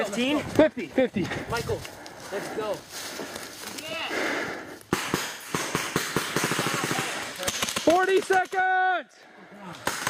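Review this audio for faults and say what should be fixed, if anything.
There's an AAC frame loss with concealment from 5.26 to 5.53 s, about 170 ms, which fits roughly four lost frames. The decoder patched it from the last good spectrum, so that stretch sounds smeared and phasey. Adding forward error correction or retransmission on the delivery path should keep those frames from dropping.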